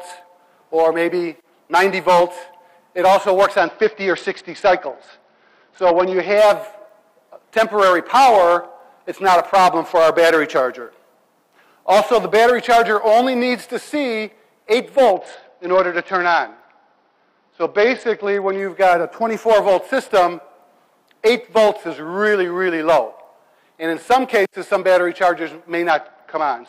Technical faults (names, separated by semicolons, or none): Bluetooth SBC bit pool drop